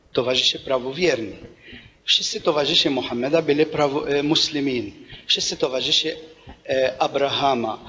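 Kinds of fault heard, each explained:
No kinds of fault are heard.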